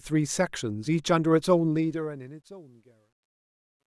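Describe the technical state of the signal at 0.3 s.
At 0.3 s the speech signal is intact, with no fault present at that moment.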